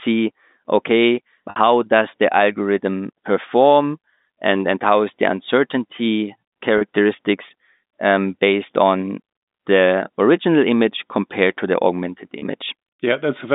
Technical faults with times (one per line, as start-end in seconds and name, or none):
1.50-1.56 packet loss with pitch repetition
6.78-6.81 packet loss with pitch repetition
12.39-12.42 packet loss with pitch repetition